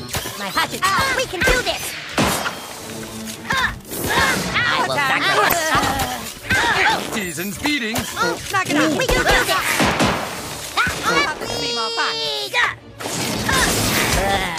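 At 5.45 s the audio breaks into a short burst of garbled noise that lasts until 5.53 s, about 80 ms. This is damaged data in a compressed stream. A small stretch of the encoded bytes is wrong, so the decoder cannot read those frames properly. It loses its place and hunts for the next valid frame header before normal decoding resumes. The result is heard as a brief blip or squawk.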